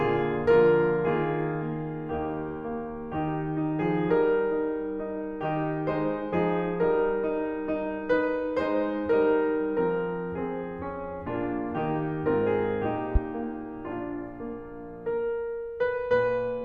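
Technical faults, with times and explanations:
13.15–13.19 s, loud pop: a single sharp transient rises about 15 dB above the music for roughly 34 ms while the music carries on underneath. The sudden onset and brief decay are those of an electrical pulse added to the signal, likely from a connector being plugged in, a switch operating or a static discharge. The circuitry downstream shapes that step into a short burst, so it reads as one abrupt pop rather than part of the music.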